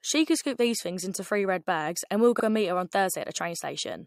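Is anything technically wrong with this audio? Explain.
Yes. Repeated frames occur at 2.39 to 2.43 s, after "bags and we will". A 42.7 ms block plays twice, fitting two resent frames, producing a brief stutter.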